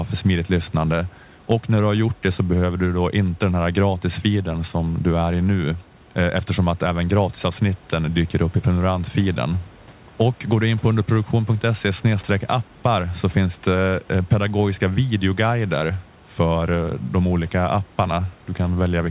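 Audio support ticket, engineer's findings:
Findings: no faults found; the speech carries the call path's usual cut-off at 4 kHz and room noise about 30 dB below the voice, both as expected.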